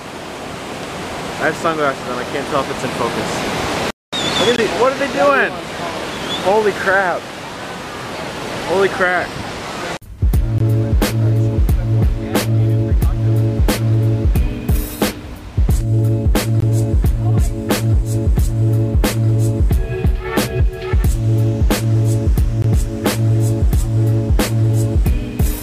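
At 4.56, 10.58, 16.60 and 22.62 s a gap between chunks opens: the audio arrives in 6 s blocks, and at each join 20 ms of silence is inserted, so the sound is interrupted without loss. Each is heard as a brief, hard-edged hole, and shows as a clean vertical blank on a spectrogram and a flat silent stretch in the waveform.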